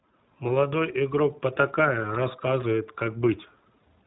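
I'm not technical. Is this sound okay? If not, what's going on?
No. The whole clip has passed through the iLBC codec, a phone-call voice compressor. Nothing above 4 kHz gets through, so the speech sounds muffled and thin. The compression damage is plainly audible, leaving the voice slightly rough and synthetic.

There are also lost iLBC frames, from 2.02 s to 2.04 s. A tiny piece of the call went missing, about 20 ms. The decoder covered it by repeating the last bit of voice with some noise. You hear a brief buzzy smear, then clear speech again.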